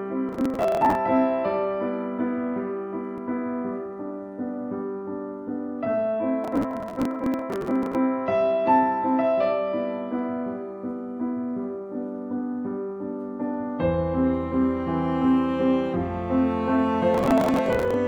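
Bursts of processor overload crackle occur from 0.29 to 0.95 s, 6.44 to 7.95 s and 17.15 to 17.94 s. Repeated missed deadlines skip buffers of roughly 10 ms, leaving dozens of hard-edged gaps that sound like gritty tearing until each overload ends.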